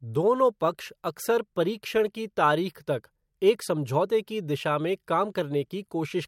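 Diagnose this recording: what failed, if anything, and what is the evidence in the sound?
Nothing failed here: the speech comes through steady and intact, with no dropouts, glitches or damage to point to at any stage of the chain.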